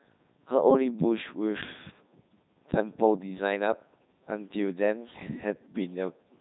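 Speech run through the Codec 2 vocoder the whole way: robotic, buzzy resynthesis with nothing above 3.8 kHz, which fits Codec 2 at its 3.2 kbit/s top rate.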